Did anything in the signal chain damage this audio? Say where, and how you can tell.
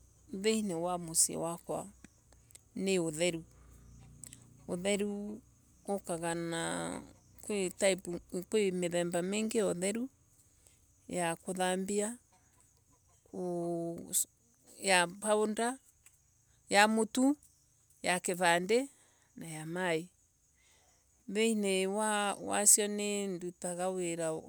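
No, nothing in this speech recording points to damage anywhere in the signal chain. No stage, from capture through to playback, leaves an audible mark on the sound.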